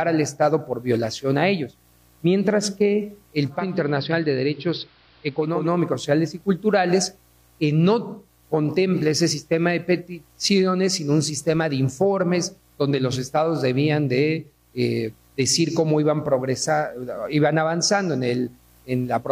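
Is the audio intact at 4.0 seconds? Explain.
No. From 3.43 to 5.80 s the sound dulls, drops about 2 dB with faint hiss: digital radio blending to analogue, a 427 ms cross-fade onto AM.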